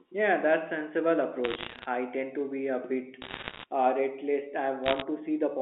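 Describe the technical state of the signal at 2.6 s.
At 2.6 s the audio is intact, carrying the narrow band of an ordinary telephone line with nothing wrong at that moment.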